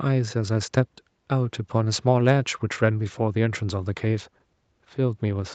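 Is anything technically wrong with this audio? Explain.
No, nothing is technically wrong with this speech. The sound stops at about 8 kHz, which fits a call path running a wideband Opus setting, and that is normal for a call rather than a fault.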